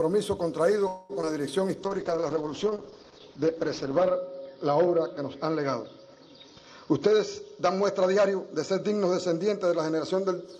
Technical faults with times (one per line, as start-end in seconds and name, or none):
0.87-1.12 call audio freeze
1.21-1.26 short concealed packet loss
1.25-1.65 jitter buffer slow-down
1.83-10.51 call bitrate drop
6.47-8.91 jitter buffer speed-up